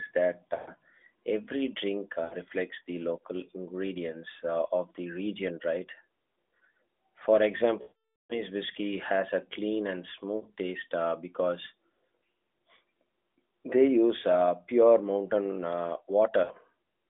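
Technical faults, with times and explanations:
0.56–0.70 s, 2.24–2.35 s, 7.82–8.42 s, 10.36–10.46 s and 16.44–16.52 s: lost AMR speech frames. In this narrowband AMR speech, capped near 3.6 kHz, the decoder loses a short stretch, 60 to 120 ms in four places, which fits a few 20 ms frames. It repeats the last good pitch and vocal tract settings at falling gain, giving a brief warbling dip. The 0.6 s gap near 8 s drags out and fades to silence before the speech returns weak or rough.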